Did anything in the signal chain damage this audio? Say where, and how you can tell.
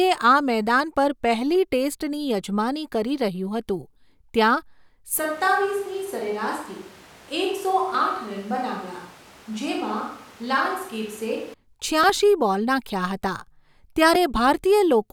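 Yes. At capture, 5.19 to 11.54 s turns hollow, roomy and about 5 dB quieter, likely a switch to a distant microphone; the spectrogram shows thinner bass and a raised noise floor.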